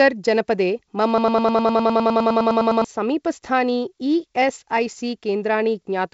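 A broken-record loop runs from 1.18 to 2.84 s in this speech clip, just after "जनपदे मम": a 102 ms fragment repeats exactly, back to back, 16 times, and whatever should have played in that stretch never arrives. The likely cause is a stalled player, encoder or stream that kept resending the last fragment it held. The wideband telephone sound, with nothing above 7.7 kHz and light hiss, fits G.722 coding.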